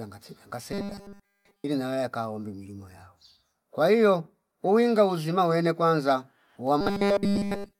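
The audio likely arrived too seldom and tiny buffers about 5 ms long were replayed in place of the real audio, from 0.72 to 1.65 s and again from 6.81 s to the end. This robotic sound from repeated short buffers turns the speech into a rigid metallic buzz fixed at 200 Hz.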